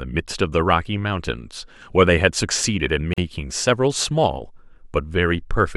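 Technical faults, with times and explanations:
3.14–3.18 s, gap at a join of encoded pieces: the speech drops into a 43 ms gap with smeared edges, then resumes where it stopped. Two separately encoded segments were butted together untrimmed, leaving encoder start delay and final-frame padding in place.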